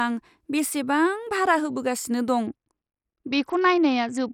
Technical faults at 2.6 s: Bluetooth SBC bit pool drop

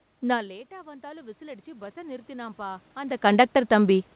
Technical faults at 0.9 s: automatic gain rising

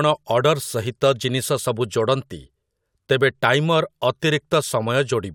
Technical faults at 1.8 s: none

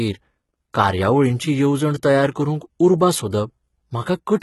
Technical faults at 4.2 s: HE-AAC compression

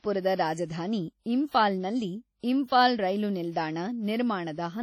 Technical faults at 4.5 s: WMA compression

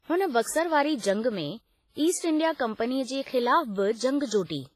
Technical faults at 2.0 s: WMA compression

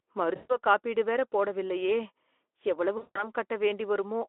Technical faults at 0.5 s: VoIP packet loss concealed by the speech codec

